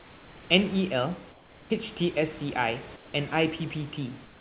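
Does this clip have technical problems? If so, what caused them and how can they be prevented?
Yes. The sender's speech detector likely halted transmission during pauses, so the receiver inserted comfort noise in place of the background at 0.0–0.5 s, 1.31–1.7 s, 2.96–3.14 s and 4.25–4.41 s. The real room background there turns into a steady, featureless hiss about 3 to 5 dB quieter. Turning off discontinuous transmission on the sending side prevents this.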